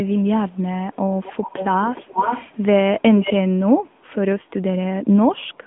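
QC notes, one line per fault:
Throughout, AMR narrowband mobile codec: the speech is confined to a phone band of about 150 Hz to 3.5 kHz, with nothing above 3.7 kHz, and has a plainly audible buzzy, synthetic edge. That edge sets it apart from a simple low-pass filter. It comes from rebuilding the voice from a vocal-tract model and sparse pulses, which fits a mid-rate mode near 10.2 kbps.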